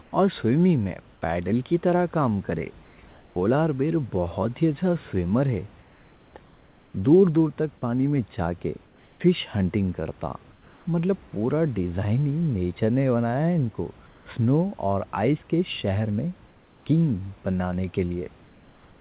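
Comfort noise in place of the background fills the pauses at 0.02–1.22, 2.84–3.36, 5.82–6.34, 8.86–9.20, 10.52–10.86, 14.06–14.26, 16.48–16.86 and 18.42–19.0 s. The room noise, about 31 dB below the speech, vanishes in each gap. A steady, featureless hiss takes its place, in the gaps from 5.82 s on about 2 to 4 dB quieter. The likely cause is discontinuous transmission: the sender stops at silence, and the receiver synthesises noise. Nothing sounds above 4 kHz, which fits a narrowband telephone codec.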